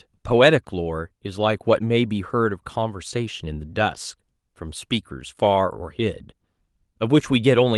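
No technical faults can be heard in this speech.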